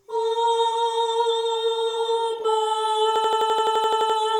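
From 3.16 s to 4.18 s, an 85.33 ms fragment repeats exactly twelve times, a machine-gun stutter at 11.7 Hz. This is a system hang loop: the computer froze while the sound hardware kept replaying one buffer, which fits a 4096-sample ring buffer.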